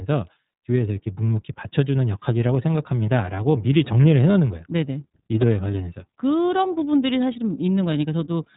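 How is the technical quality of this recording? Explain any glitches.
The recording is held back by narrowband codec coding that runs the whole way through. From start to finish, the speech has passed through the iLBC codec, which codes each short frame's excitation on its own, without drawing on the frame before. The roughness suggests 30 ms frames, which fits the 13.33 kbps mode. Nothing above about 3.8 kHz survives, so the speech sounds muffled and telephone-like, and the damage is plainly audible as a rough, slightly synthetic edge.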